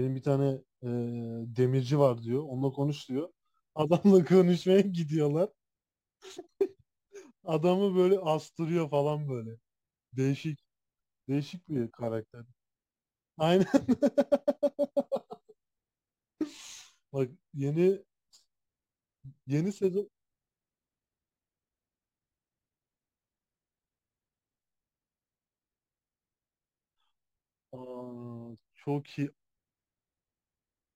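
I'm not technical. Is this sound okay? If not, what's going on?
No. Throughout the whole speech clip there is crude rate conversion: the audio was converted to a slightly different sample rate by simply dropping samples without filtering. This leaves a faint gritty, buzzing fizz that rides on louder and brighter moments of the speech.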